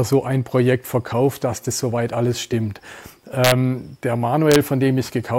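Integer overflow occurs at 3.44 to 3.52 s and again at 4.52 to 4.56 s. Peaks pushed about 2 dB and about 1 dB past the integer limit wrap to the opposite sign instead of being held, producing sudden cracks sharper than clipping.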